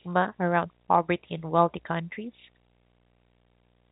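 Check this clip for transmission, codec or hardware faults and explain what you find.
One hardware fault runs through the whole clip: video or display buzz.

From start to finish, a screen or video cable is coupling interference into the audio. It produces a low buzz at 59.94 Hz, the picture's field rate, with hash above it and a thin whine at 15.7 kHz, the line rate, sitting roughly 40 dB below the speech. On a spectrogram this shows as a harmonic comb stacked on 59.94 Hz and a steady horizontal line at 15.7 kHz. The speech band itself stops near 3.8 kHz, as telephone coding would, so that line stands alone far above it, which points to the pickup happening after the phone path. In the waveform the buzz is a faint periodic ripple visible in the pauses.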